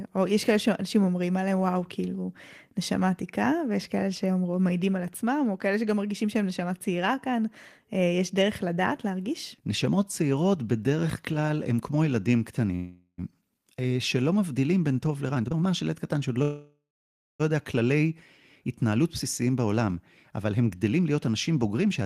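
At 12.75 s a call audio freeze begins. The last sound is stretched into a fading buzz, then about 50 ms of silence. The speech resumes at 13.2 s with nothing lost, now 427 ms later. Delayed packets likely emptied the jitter buffer.

From 15.30 to 16.38 s comes a jitter buffer speed-up. Tiny pitch-period slices are cut repeatedly. The speech runs at 134% with the same pitch and sounds rushed, dropping roughly 0.4 s of backlog.

At 16.42 s a longer freeze follows. The held sound decays into about 570 ms of silence. The speech picks up again at 17.42 s after a 973 ms gap, again intact.

From 18.91 to 22.02 s a second, gentler speed-up runs at 108%. It trims roughly 0.3 s, so the pace is slightly hurried.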